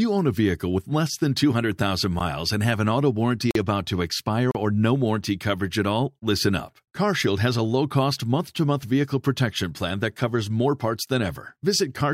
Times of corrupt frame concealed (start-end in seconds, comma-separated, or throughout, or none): none